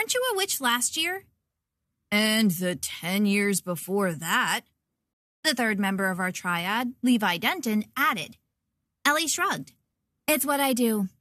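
A rebuffering stall interrupts the audio at 5.13 s: the player ran dry of downloaded data, fell silent until 5.43 s, then resumed exactly where it stopped, adding 295 ms without losing any sound. The waveform shows a flat gap, and the spectrogram a blank vertical band.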